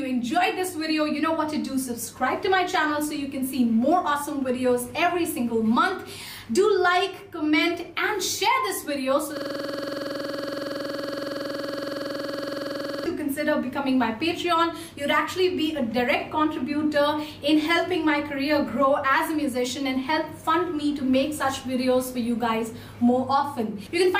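From 9.37 to 13.06 s the audio falls into a system hang loop: one 46.4 ms slice, which fits a 2048-sample buffer, repeats exactly at 21.5 Hz as a rasping stutter. The waveform shows identical tiled blocks, and the spectrogram shows evenly spaced vertical stripes.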